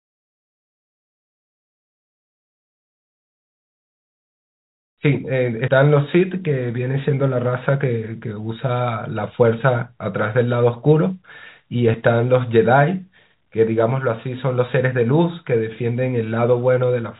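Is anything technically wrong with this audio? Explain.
Yes. At 5.68 s and 11.94 s the speech jumps ahead, losing roughly 70 ms and 20 ms. The likely cause is a dropped buffer (overrun). Samples were overwritten before being read, so the two sides join with no silence.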